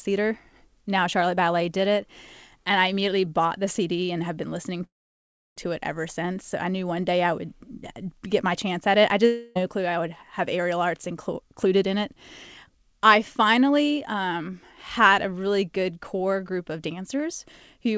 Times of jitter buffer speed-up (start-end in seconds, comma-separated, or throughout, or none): 10.93-12.17, 12.70-13.85